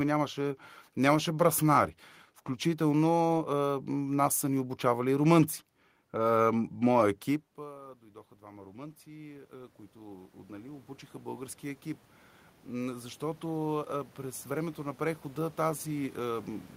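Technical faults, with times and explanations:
7.56 to 16.55 s, automatic gain rising: when the talker moves away around 7.5 s, the input drops about 23 dB and the gain control slowly adds about 20 dB, so voice and room noise swell together. The waveform envelope and the spectrogram's noise floor climb gradually.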